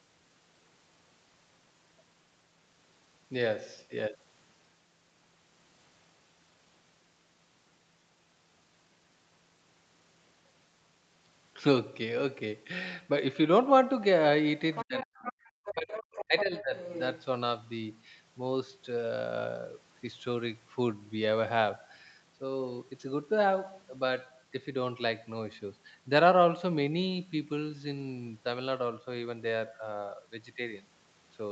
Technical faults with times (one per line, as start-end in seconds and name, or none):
14.73-15.32 other side's voice leaking through
14.84-16.75 speech suppressed in double talk
15.65-17.24 other side's voice leaking through